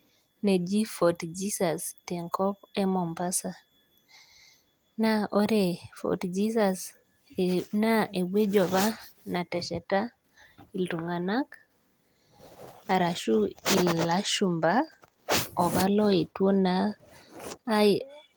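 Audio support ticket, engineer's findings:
Listened through the speech recording and nothing turned up on my end, so no findings to log for this one.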